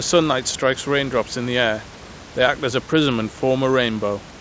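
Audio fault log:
No faults found; room noise sits about 19 dB below the speech, and nothing is heard above 8 kHz, which fits the normal band limit of a G.722 wideband call path.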